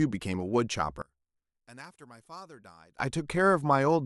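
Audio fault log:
1.02–2.99 s, one channel inverted: the speech drops by about 25 dB to a faint residue, as if most of the sound had been cancelled, then returns at full level. This is likely one stereo channel flipped in polarity, so the centred content common to both sides cancels when summed to mono. On a waveform the envelope collapses to a narrow band for those two seconds. A spectrogram shows the whole band fading to weak traces.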